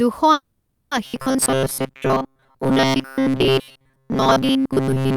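The recording is speech with two distinct transmission faults. From 0.33 to 0.93 s there is a call audio freeze: the last sound is stretched into a fading buzz for about 580 ms with no silence. It likely comes from delayed packets draining the jitter buffer, so nothing is lost, but everything after arrives about 580 ms late. From 1.06 s to the end, the audio has robotic sound from repeated short buffers, a rigid metallic buzz at 133 Hz that still loosely tracks the speech. This likely results from the receiver looping a segment of roughly 7.5 ms while most of the real audio is discarded.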